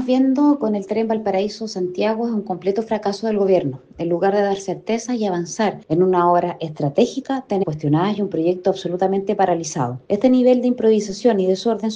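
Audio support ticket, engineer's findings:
Abrupt jump ahead in the sound with a short blip at 7.62–7.64 s. Likely a stream segment skipped: one segment failed to load and playback resumed at the next.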